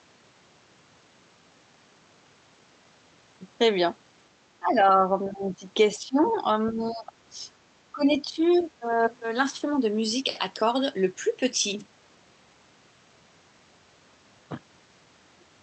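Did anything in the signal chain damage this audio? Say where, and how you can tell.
Yes, in the call processing. The echo canceller likely hit double talk it could not resolve and turned down the near talker along with the echo. The speech dips at 4.59–4.98, 5.25–5.64, 5.96–6.44, 6.7–7.12, 7.92–8.43 and 8.8–8.84 s, falling by about 10 to 20 dB, deepest in the first dip. The talker thins and partly drops out in bursts rather than fading smoothly. That pattern is the speech suppressed in double talk.

At the same stage, the other side's voice is leaking through. The canceller likely failed to subtract all of the loudspeaker signal picked up by the microphone. Brief scraps of a second voice surface at 6.25–6.33 s, about 20 dB below the talker, and at 8.58–8.64 s, about 30 dB below. Both fall inside or beside the suppression dips, which fits a canceller struggling while both sides speak.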